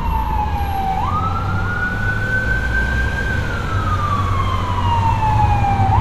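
No technical fault can be heard in this recording of sounds. There is nothing to point to at any moment in the audio.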